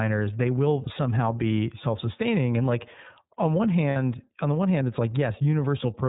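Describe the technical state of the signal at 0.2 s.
At 0.2 s the speech sounds band-limited, rough and synthetic, as it does throughout: iLBC codec damage. Nothing above 4 kHz survives, and each frame's excitation is coded on its own, which fits 30 ms frames.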